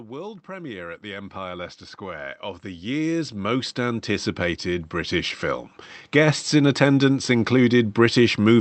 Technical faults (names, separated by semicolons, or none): automatic gain rising